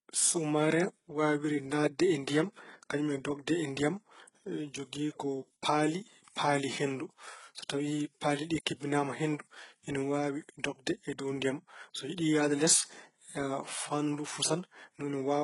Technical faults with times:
0.00-15.44 HE-AAC compression

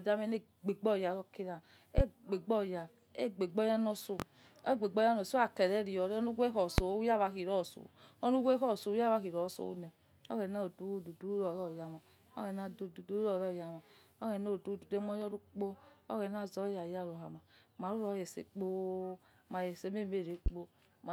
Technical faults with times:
1.98-2.02 loud pop
4.20-4.24 loud pop
6.78-6.82 loud pop
20.46-20.50 loud pop

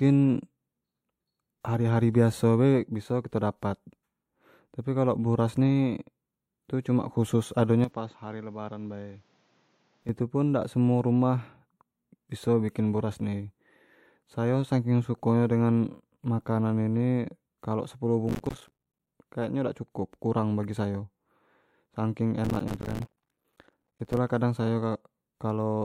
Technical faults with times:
7.84-10.09 input switched to a poorer device
8.11-8.15 compressed frames skipped
18.29-19.09 processor overload crackle
22.45-24.17 processor overload crackle

